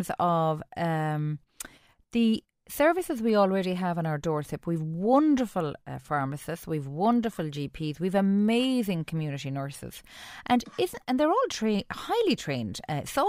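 No technical faults can be heard at any point in the speech, so there is nothing to describe in time order.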